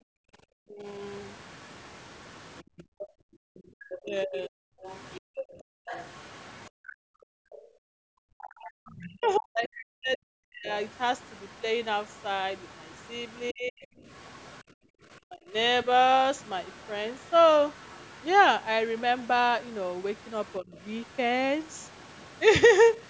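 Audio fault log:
0.0–8.0 s and 14.63–14.98 s, background gated by the echo canceller: room sound drops out, by up to about 40 dB, then about 33 dB. The canceller clamps the microphone while the loudspeaker plays.
0.66–0.87 s, 4.01–4.56 s, 8.28–15.87 s, 20.59–20.73 s, speech suppressed in double talk: the talker dips by about 20 to 40 dB, likely because both sides spoke at once.
1.14–22.36 s, other side's voice leaking through: a faint second voice sits about 25 dB below the talker. It is likely loudspeaker echo the canceller did not fully remove.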